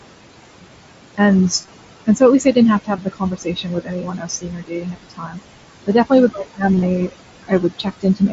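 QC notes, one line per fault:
Throughout: noise suppressor artifacts. The room noise, about 12 dB under the speech, is pulled down by about 20 dB between phrases and lets back in under them. On a spectrogram the noise floor pumps, with patchy speckled gaps.
1.62–1.68 s, 2.97 s, 6.75–6.82 s: concealed Bluetooth headset packet loss. Short dropouts were patched by repeating the last matching stretch of waveform. At 1.62 s about 38 ms went missing across 60 ms, and at 6.75 s about 45 ms across 75 ms. Each gap lasted at most about 23 ms, heard as a brief buzzy hiccup. The waveform shows repeated identical cycles, and the spectrogram shows flat harmonic smears.
2.85–5.40 s, 6.31–6.63 s, 7.43 s to the end: speech cut by the noise suppressor. The suppressor treated quieter speech as noise, and soft consonants and word endings fade out by up to about 21 dB. About two seconds in total is affected in the first span, and the cut right after "definitely with" reaches about 17 dB. 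On the waveform the envelope dips suddenly, and on the spectrogram the upper bands go dark.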